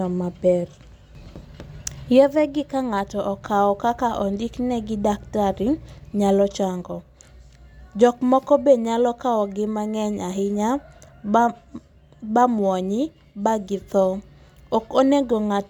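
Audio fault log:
Nothing stood out on listening to this speech recording.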